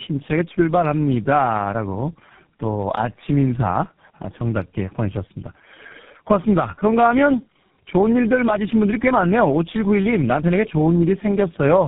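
Tandem speech coding runs through the whole of this speech clip. The sound is rough, muffled and warbly, with nothing above 3.8 kHz, which points to three low-bitrate speech coders in a row, the last behaving like GSM full rate. At each link boundary the call was decoded and coded again, so every coder had to model audio already damaged by the one before. The distortions stacked up, leaving the speech worse than any single coder would.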